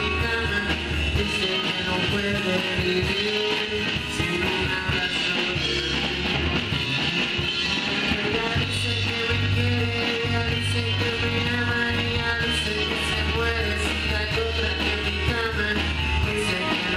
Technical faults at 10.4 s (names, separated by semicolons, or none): none